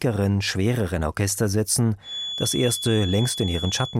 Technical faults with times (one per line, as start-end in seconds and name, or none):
2.00-3.99 feedback whistle